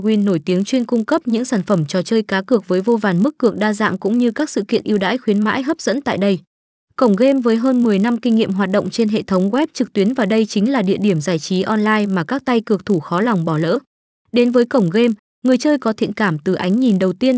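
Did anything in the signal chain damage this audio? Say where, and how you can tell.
Yes. The resampler restarted on every block in the 44.1 kHz to 16 kHz conversion, so each 20 ms block edge carries a small error. The result is a 50 Hz buzz throughout, only under speech, seen as faint vertical lines every 20 ms on a spectrogram.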